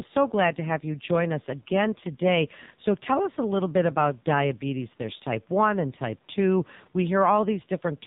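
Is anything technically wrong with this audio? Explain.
Yes. Throughout, the speech sounds buzzy, synthetic and muffled, with nothing above 4 kHz. This is the AMR narrowband mobile codec rebuilding the voice from sparse pulses, which fits a low mode of about 5.9 kbps.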